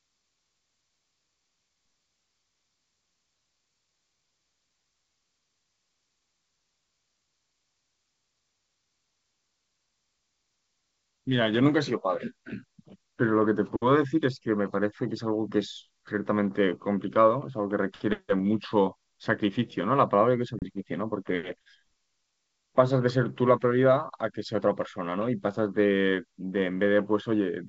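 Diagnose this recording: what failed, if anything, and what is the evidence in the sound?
The network stage failed, showing as packet loss on an ADPCM call at 20.59 to 20.64 s. About 30 ms of sound, a few packets' worth, is replaced by silence. The waveform drops abruptly to a flat line, and the spectrogram shows a sharp-edged blank vertical strip across the G.722 wideband range. The decoder's adaptive predictor and step size lose step with the sender, so the sound comes back slightly distorted and settles within some tens of milliseconds.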